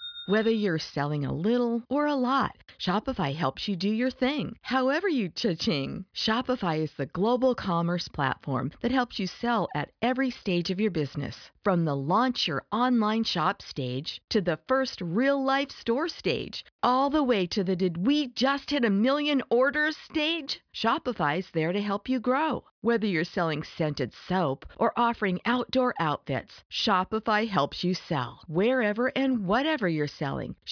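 A recording of speech with no technical faults to report at any point in the signal.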